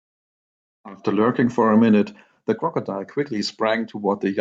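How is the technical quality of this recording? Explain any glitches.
No audible technical faults in the recording, so there are no glitches to explain.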